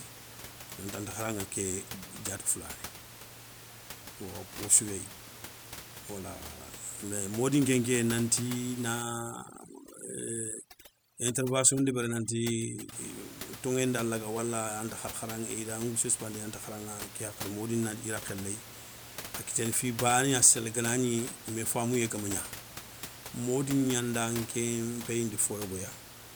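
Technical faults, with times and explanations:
9.02 to 12.92 s, overdone noise removal: for almost four seconds the background drops, dotted with brief twinkling specks. A noise reduction stage is working far too hard here. Against room noise sitting about 14 dB below the speech, it pushes individual frequency bands down or off whenever they come close to its noise estimate, and it takes the softer parts of the speech away with them.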